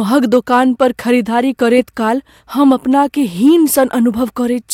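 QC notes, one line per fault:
0.17–0.83 s, 1.65–1.78 s, 2.63–2.99 s, 3.46–3.84 s, hard clipping: speech peaks drive past full scale, by about 3 dB in the first and last spans and about 1 dB in the middle two, so waveform tops are sliced flat, spraying high harmonics heard as crackly, gritty distortion.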